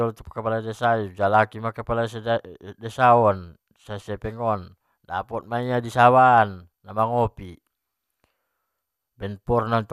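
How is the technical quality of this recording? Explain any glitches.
Listening closely to the speech recording, nothing stood out as a technical problem, so there are no glitches to explain.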